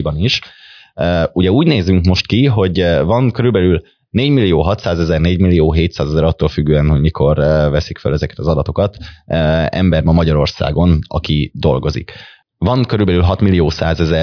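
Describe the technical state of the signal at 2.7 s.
At 2.7 s the speech signal is intact, with no audible dropout, clipping, distortion or other fault at that point.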